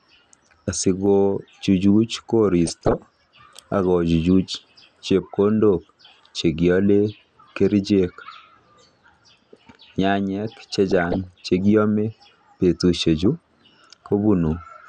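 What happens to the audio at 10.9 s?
From 10.91 to 11.24 s there is DAB burbling: bit errors from weak reception slip past error correction into the MP2 data, corrupting samples and scale factors so single sub-bands jump in level frame by frame. The sound becomes a burble of noise blips in single sub-bands across about a third of a second. The damage fits a bit error rate of around half a percent spread over 14 frames.

Underneath this, the speech is dull and granular, with a gurgling distortion. That is likely MP2 compression at a rate near 80 kbps, with high sub-bands switched off and the remaining bands coarsely quantised.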